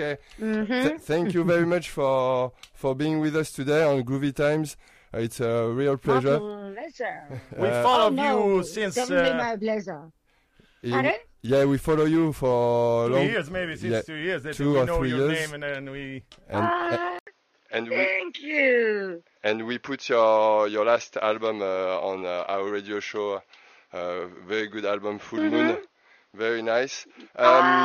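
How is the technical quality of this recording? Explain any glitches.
One real problem. At 17.19 s there's an 80 ms dropout, and from there to the end nothing comes through above 6.6 kHz, so it turns dull and boxy. The level shifts by a few dB and faint new background noise appears. Likely the input switched to a poorer device.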